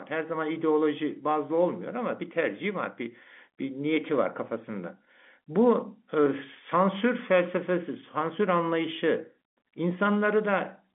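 Nothing here goes wrong: the speech comes across as an ordinary phone line, with G.711 telephone coding keeping the sound within roughly 200 Hz to 3.4 kHz and nothing above about 3.7 kHz.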